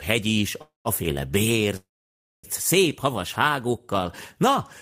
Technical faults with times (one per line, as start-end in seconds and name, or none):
0.61-0.88 call audio freeze
1.76-2.46 call audio freeze